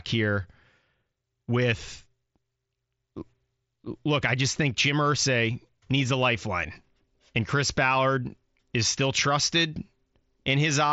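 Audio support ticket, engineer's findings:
No faults found. The Bluetooth mSBC headset codec path is audible as a bandwidth ceiling near 7.7 kHz with light codec grain, as expected for that link.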